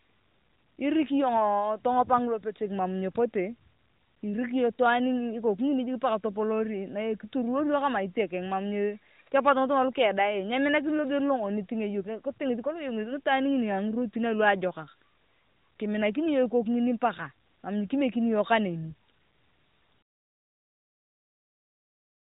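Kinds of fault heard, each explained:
Nothing faulty turns up anywhere in this one.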